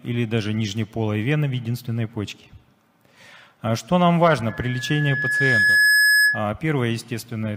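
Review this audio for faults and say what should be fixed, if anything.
A loudspeaker feedback squeal runs from 4.48 to 6.48 s. A microphone is picking up the loudspeaker it feeds, and at 1.7 kHz the gain around that loop rises above one, so the frequency keeps reinforcing itself on each pass. You hear a single tone swell over roughly one and a half seconds into a squeal sitting about 5 dB above the rest of the sound. To prevent it, lower the loop gain at 1.7 kHz with a notch filter, less microphone gain, or better speaker placement.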